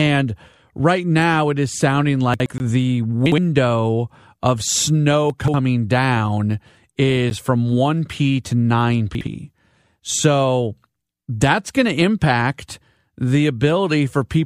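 Chunks out of order at 2.34 to 2.46 s: a 60 ms piece of the speech plays one chunk late, after the audio that should follow it. Nothing is lost, but the reordering leaves hard joins, heard as a jumbled blip. A block of digital silence at 2.58 to 2.60 s then plays 20 ms of zeros, likely because the output buffer went unfilled in time. The abrupt cut and return, with no fade, gives a short hole. The same reordering returns at 3.26 to 3.38 s, and more severely at 5.30 to 5.54 s, where a 60 ms chunk lands three chunks late and garbles a longer stretch. A second 10 ms block of silence at 7.30 s sounds as a single tick. The last out-of-order chunk, one chunk late, falls at 9.15 to 9.27 s.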